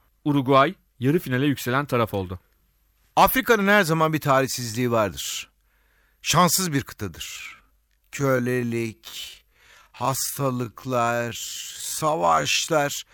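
From 7.29 s to 12.69 s the speech becomes a time-stretched section, slowed to about 0.57 times normal pace while pitch holds steady. The likely cause is software lengthening the audio by repeating short segments, which makes the passage drag, with an abrupt change in pace.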